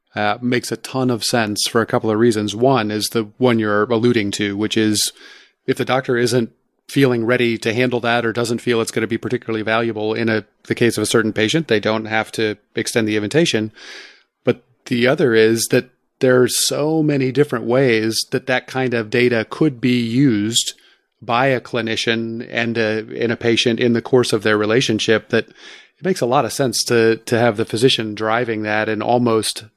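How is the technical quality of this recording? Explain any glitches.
Good news: there's nothing here to explain, since no glitches turn up anywhere in this recording.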